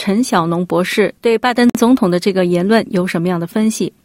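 At 1.70 s there's a gap at a join of encoded pieces: a gap of about 52 ms with smeared edges, from untrimmed encoder padding, before the sound picks up again.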